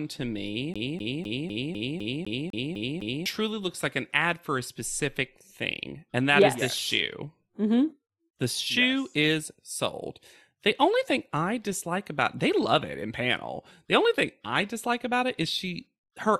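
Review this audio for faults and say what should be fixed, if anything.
From 0.74 to 3.26 s the speech hits a CD stuck on one turn: one 252 ms slice repeats ten times, muting briefly at each jump, before "truly looks like an". Unlike a dropout, audio repeats rather than vanishing. Clean or re-rip the disc.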